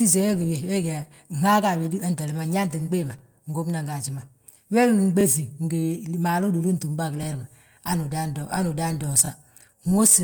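Speech with overlapping chunks: brief stutters at 1.16–1.19, 3.19–3.21 (before "ngóbnan gaaji ma"), 5.21–5.23, 7.23–7.26 (after "be a") and 9.26–9.28 s. Each join in 2-second chunks replays about 23 ms of sound.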